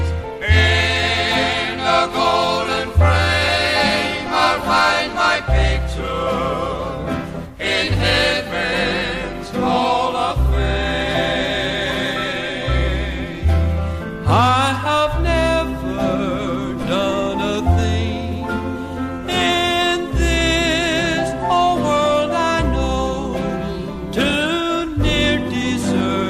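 No technical faults can be heard anywhere in the audio, and the signal stays steady and intact throughout.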